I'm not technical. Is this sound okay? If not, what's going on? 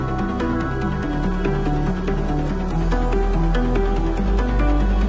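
Yes, nothing in this recording points to a technical problem with how the audio was captured or carried.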